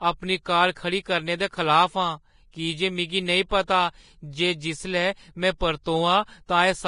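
Vorbis compression is the likely cause of the damage heard throughout this speech recording: nothing survives above 10.5 kHz, and the remaining treble is so coarsely quantised that fine detail turns to grainy hiss and tones sound roughened, which fits a low bitrate around 31 kbps. Pre-echo appears at 0.72–0.76 s just after "अपनी कार", at 2.51–2.53 s, at 3.49–3.51 s, and at 5.58–5.61 s and 5.83–5.86 s after "जे जिसलै में". Each time, quantisation noise spread across a transform block fills the quiet 20–43 ms ahead of a sharp onset, so a brief hiss precedes the attack and softens it.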